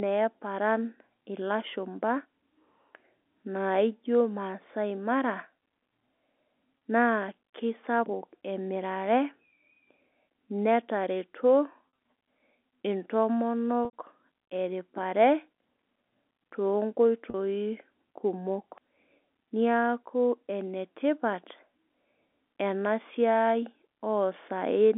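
Packet loss with pitch repetition mars this telephone-band speech at 6.78–6.81, 11.86–11.98, 13.85–13.93 and 17.30–17.34 s: the receiver repeats the last pitch period, producing brief buzzy held tones, while the longer 13.85 s gap fades into silence before the speech returns with a short cross-fade.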